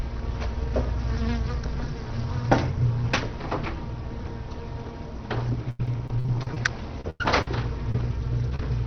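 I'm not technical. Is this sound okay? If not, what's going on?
No. Repeated packet loss (robotic sound) runs from 5.70 to 8.01 s. Twelve chunks of audio went missing in a row, the longest about a tenth of a second. Each was papered over by stretching the sound before it, so that stretch sounds choppy and robotic.

A lost packet rebuilt from error correction happens at 8.43, 8.54 and 8.59 s. A rough backup copy filled each tiny hole, so nothing drops out, but those moments sound grainier.

Short concealed packet loss hits from 8.50 to 8.61 s and again from 8.56 to 8.60 s. Brief bits arrived too late and were guessed from the preceding sound, giving a quick smear or wobble.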